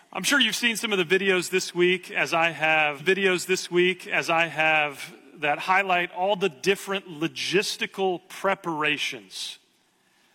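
A stream segment repeated at 2.97 s: about 1.96 s replays until 4.93 s, with a blip at the jump, seen as identical waveform blocks side by side.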